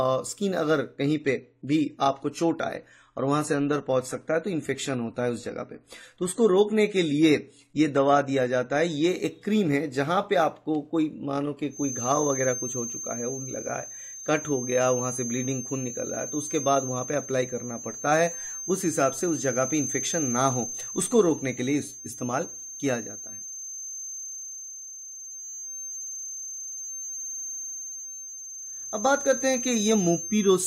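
The audio has two technical faults. From 1.07 s to 9.07 s it drops to an adaptive stream at a lower bitrate: the connection evidently slowed and the player switched to a leaner encode without any gap, so the quality change is abrupt. Nothing is left above 14 kHz, the top end turns dull, and coding artefacts become more audible. The degradation fits a step down from around 96 kbit/s to around 32 kbit/s AAC, and the full bandwidth returns at 9.07 s. From 11.68 s to the end, a thin, steady feedback whistle sits at 6.3 kHz, about 10 dB below the main signal and swelling and fading slowly in level. It never builds into runaway howl. The likely cause is a loudspeaker-to-microphone loop held right at the edge of feedback, so this single frequency keeps ringing without growing.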